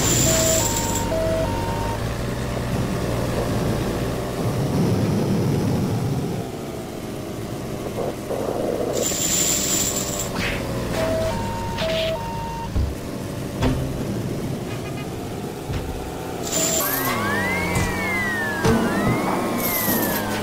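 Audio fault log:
16.80–20.42 s, section at the wrong speed: the sound runs 1.74 times fast, pitch rising about ten semitones with it. Likely played against the wrong clock.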